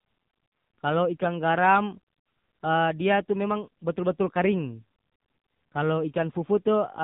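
Speech passed through the AMR narrowband mobile codec for its full length: nothing above 3.8 kHz survives, and the heavy buzzy, synthetic coloration points to a low mode near 6.7 kbps.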